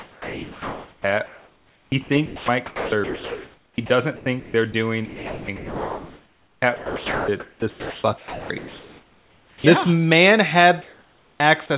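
From 0.0 to 3.9 s, 4.16 to 4.74 s and 5.06 to 9.64 s the speech is chopped by the voice detector. The sender's detector likely kept switching off and on during the talking, so quiet syllables and word edges were replaced by synthetic fill: about 3 s of the first stretch, about 0.26 s of the second and nearly 4 s of the third. The speech sounds choppy. On a spectrogram the harmonic speech bands are broken into fragments by smooth, uniform noise patches. In the waveform, speech bursts alternate with low, even-textured fill.

From 10.82 to 11.4 s there is comfort noise in place of the background. During this pause the sender likely stopped transmitting, and the receiver generated steady noise roughly matched to the room. The real background, which sits about 36 to 37 dB below the speech, gives way to a featureless hiss about 5 dB quieter. A spectrogram shows a sudden switch from textured, varying noise to a smooth, even band. 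The waveform envelope drops slightly and becomes unnaturally constant.

At 11.38 to 11.40 s the onset is clipped by the voice detector. The detector was likely slow to register that speech had resumed, so the first 20 ms were never sent and fill played instead. The next word starts abruptly, without its soft attack. The waveform jumps straight from low noise to full amplitude, and the spectrogram shows a hard vertical edge with no gradual build-up.

At 11.66 to 11.70 s the sound is dropped by the voice detector. The detector likely took the speech for background, so about 40 ms of speech was lost and replaced by noise. The result is a brief gap in the speech. It shows as a short, smooth noise slot cutting through the speech energy on a spectrogram, and as a small dip in the waveform.

Nothing reaches above 4 kHz in any part of the clip, which fits a G.711 call path at 64 kbps.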